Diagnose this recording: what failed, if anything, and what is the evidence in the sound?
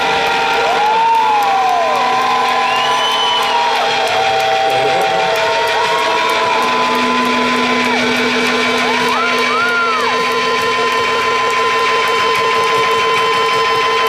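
Nothing failed: no stage from capture through to playback leaves an audible fault in the recording.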